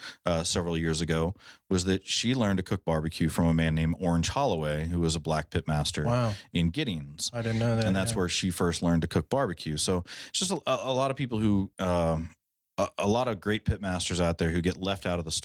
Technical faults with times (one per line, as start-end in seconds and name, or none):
none